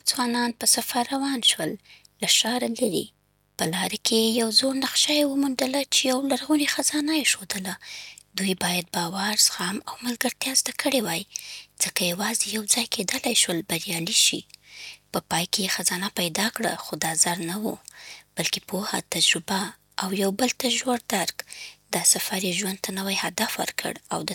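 Mains buzz runs through the whole speech clip, from the first second to the last. Sharp switching spikes from something like a dimmer, a rectifier or an unshielded cable have leaked into the signal path, arriving twice per cycle of the 50 Hz supply. Because the spikes are so abrupt, they spread into a dense stack of 50 Hz harmonics climbing into the kilohertz range. The result is a constant, raspy buzz sitting roughly 40 dB below the speech.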